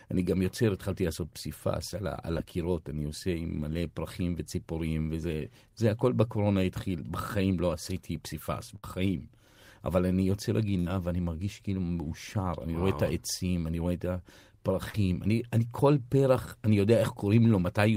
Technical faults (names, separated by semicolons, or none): short concealed packet loss; burst of packet loss